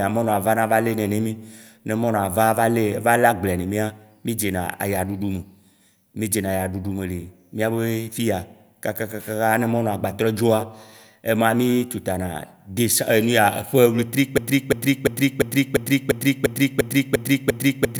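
At 14.38 s the speech catches on a broken-record loop. A fragment about 0.35 s long repeats exactly, back to back, ten times. It runs until the clip ends. Nothing new is heard after the loop begins. The speech that should have followed is simply gone. The likely cause is a stall in the player, encoder or stream. It kept resending the last piece it held instead of fresh audio.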